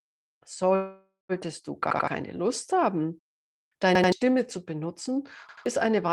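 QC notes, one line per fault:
0.75–1.32 s, call audio freeze: the sound at 0.75 s is carried on as a buzz or hiss that fades out, with about 170 ms of silence before the speech resumes exactly where it left off. The likely cause is packets held up in transit, which let the jitter buffer run empty so the receiver filled about 540 ms itself. Nothing is missing, but everything afterwards plays about 0.54 s late.
1.91–2.08 s, 3.95–4.12 s (just before "zu benutzen"), 5.49–5.66 s (just after "zu benutzen"), repeated buffer: in each place the same 85 ms piece plays three times with a hard join at every repeat, which is heard as a short stutter. New audio missed its deadline, so the device replayed its last buffer twice. The 85 ms length fits a 4096-sample buffer, and each event drops roughly 150 ms of new audio.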